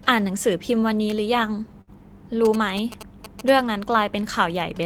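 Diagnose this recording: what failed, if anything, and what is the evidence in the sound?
From 1.81 to 1.90 s the last sound is held and fades away, then the speech jumps ahead. This is a network burst of packet loss: 56 ms concealed, 60 ms lost.

From 2.45 to 3.50 s there is a galloping 217 Hz ticking buzz, not far below the speech. These are GSM signalling bursts from a nearby phone, rectified in the analogue wiring.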